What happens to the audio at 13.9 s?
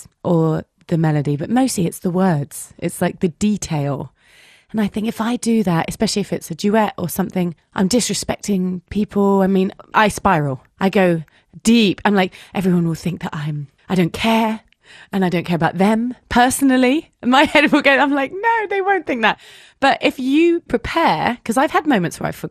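MP2 compression damage is audible at 13.9 s, as it is throughout the speech. The dull, gurgling, granular texture likely comes from MPEG Layer II coding starving its 32 sub-bands of bits, so upper bands flicker off and the rest are coarsely quantised, which fits a low rate near 80 kbps.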